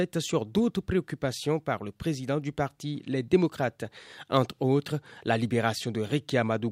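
Listening to this speech recording, nothing technical stood out at any point.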